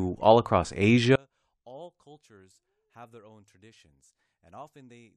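From 1.16 s to the end, the speech collapses by about 32 dB on mono playback, leaving only a faint residue. The likely cause is one channel inverted: with one side's polarity reversed, the shared centre content cancels when the channels sum.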